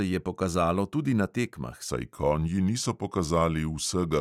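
From 1.90 s to the end at 4.20 s, a section at the wrong speed: the speech slows to 0.893 times its original rate, and pitch drops with it by about two semitones, so the voice turns deeper and more drawn out from that point on. The shift is abrupt rather than gradual. The likely cause is this portion being played back or resampled against a mismatched clock.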